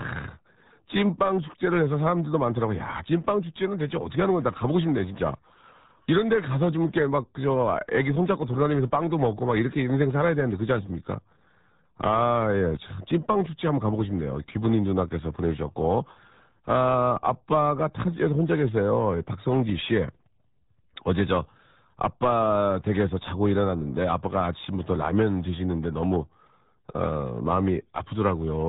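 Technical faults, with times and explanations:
Throughout: RealAudio 14.4 codec. Muffled, gargly speech with nothing above 3.8 kHz, the sound of a heavily squeezed low-bitrate stream that fits roughly 8 kbit/s.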